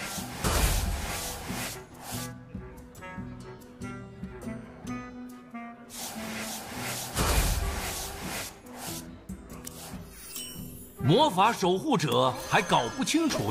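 At 0.44 s, damaged data in the compressed stream makes the decoder misread a frame and hunt for the next header, leaving a brief glitch in the sound.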